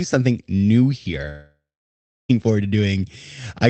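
At 1.29 s, just after "something new here", the speech breaks off. The last sound carries on briefly as a fading buzz, then gives way to near-silence for roughly 0.68 s, and speech resumes at 2.31 s on "forward to" with about a second of material simply gone. This is a long network dropout, likely a run of lost packets that the receiver's concealment could only briefly bridge before muting, with the call codec's 8 kHz upper limit audible throughout.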